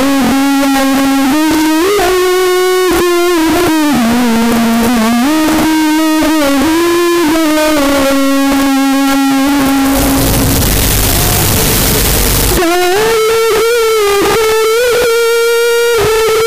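Throughout, the float-read-as-integer fault makes the waveform nearly square at an almost fixed, high level. It is very loud and harsh. The likely cause is 32-bit float samples read as 32-bit integers.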